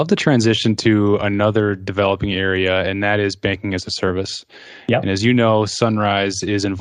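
No technical faults are audible.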